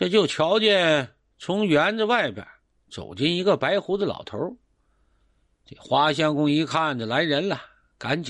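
The audio sounds dull and gurgling across its whole length, with a granular, swirling roughness and high-frequency content that drops in and out rather than staying steady. That pattern is most likely MP2 compression at a starved bitrate, consistent with a rate around 80 kbps. Too few bits to cover all 32 sub-bands forces the encoder to shut off upper bands intermittently and quantise the remaining ones coarsely, leaving plainly audible codec damage.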